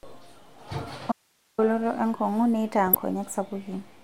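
Speech, where the signal path likely lost its input for a moment while the chain after the break stayed live, giving an audio dropout to a faint residue: from 1.12 to 1.58 s the speech cuts out abruptly and only hiss remains, about 40 dB below the speech. Then weak DAB reception let bit errors, at a small fraction of a percent, slip past error correction into the MP2 data, causing DAB burbling from 2.87 to 2.96 s: short blips of noise land in single sub-bands, consistent with about four corrupted frames.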